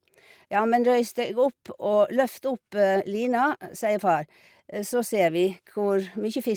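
No audible technical faults.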